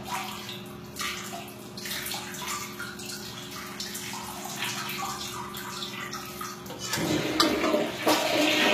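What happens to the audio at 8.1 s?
At 8.1 s the sound carries HE-AAC compression, as it does for the whole clip. The treble is likely rebuilt from copied lower bands, which fits a low bitrate near 20 kbps. Highs sound gritty and metallic, and nothing remains above 14.9 kHz.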